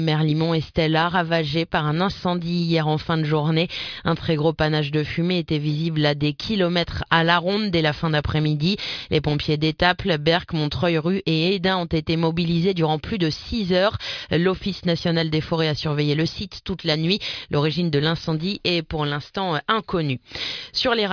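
Nothing goes wrong anywhere in this audio, so there's no technical fault to point to at any moment.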